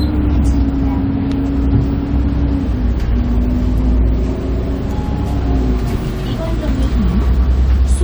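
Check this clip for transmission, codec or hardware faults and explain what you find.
Nothing here points to a transmission, codec or hardware problem; there are no dropouts, glitches or odd artefacts to report.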